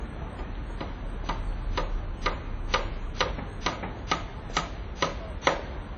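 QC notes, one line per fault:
Throughout, WMA compression: nothing above 8.5 kHz; long-block quantisation noise smears into ringing, breathing hiss, likely from a low-bitrate WMA encode around 32 kbps.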